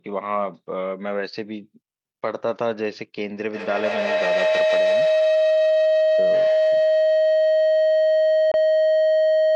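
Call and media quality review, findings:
Feedback howl from 3.5 s to the end at 9.55 s. A tonal build-up sits around 700 Hz and peaks about 5 dB above the speech level. The repeats come at roughly 150 ms intervals. The probable component is an acoustic loop, with a second device in the same room on the call. Each mic-to-speaker pass adds gain, so the repeats grow and narrow onto the loop's favoured frequency instead of decaying. It is not broken within the clip, and no mute is heard.

Dropout at 8.51 s. There is a 23 ms hole in the output, on top of the ongoing howl. Playback resumes as if time kept running, so the content in the gap is skipped, not delayed. The likely cause is a Bluetooth dropout on the headphone link, with packets arriving too late and being discarded. The gap length fits a single lost packet.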